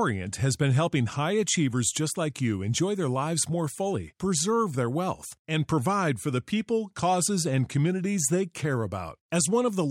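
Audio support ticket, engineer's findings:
Listened to the full speech clip: nothing stood out, no findings to log.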